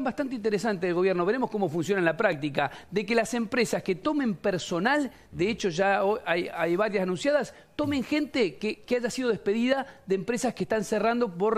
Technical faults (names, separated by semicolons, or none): overlap between stream segments